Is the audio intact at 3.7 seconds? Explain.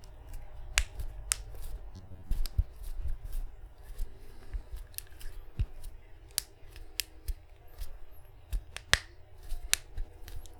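Yes, at 3.7 seconds the sound plays through cleanly, with no dropout, click, distortion or other fault.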